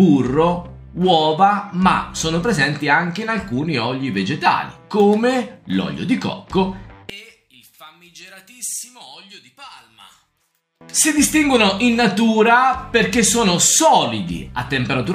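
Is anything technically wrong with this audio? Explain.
Yes. One channel inverted, from 7.10 to 10.81 s: the level falls by about 21 dB, and what remains sounds faint and distant, as if the centre of the sound has been hollowed out. The likely cause is one stereo channel flipping polarity, so when the two channels are summed to mono, the material they share cancels. Only the difference between left and right survives, leaving a faint residue until the normal level returns at 10.81 s.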